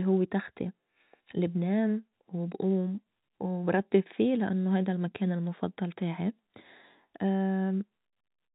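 No technical faults are audible in this speech recording.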